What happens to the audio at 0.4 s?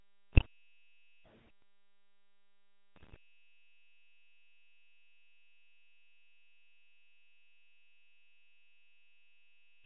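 At 0.4 s you're in the middle of a burst of GSM bit errors running from 0.33 to 0.46 s. Corrupted bits reached the decoder and scrambled its filter, pitch and gain values, so the sound briefly squawks, pops and gargles. The span fits roughly seven damaged frames.

Under that, the whole clip carries the GSM full-rate codec at 13 kbps. It models the vocal tract and drives it with a sparse pulse excitation, which gives the speech a plainly audible buzzy, gravelly roughness, with nothing left above 4 kHz.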